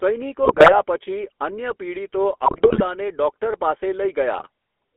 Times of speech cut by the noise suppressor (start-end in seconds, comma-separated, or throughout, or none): none